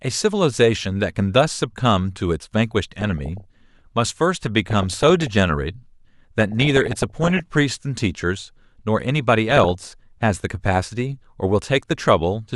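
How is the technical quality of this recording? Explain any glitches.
The recording suffers from DAB burbling in four bursts: 2.84 to 3.79 s, 4.70 to 5.28 s, 6.40 to 7.40 s and 9.50 to 9.92 s. Weak reception lets bit errors, somewhere between half a percent and one percent, slip past error correction into the MP2 audio data. Corrupted samples put short blips of noise into single sub-bands, and corrupted scale factors make individual sub-bands leap in level for up to a frame, so the speech is overlaid with burbling.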